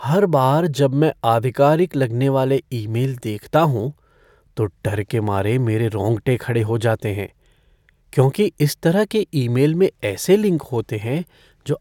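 Nothing in the recording stood out as a technical problem on listening.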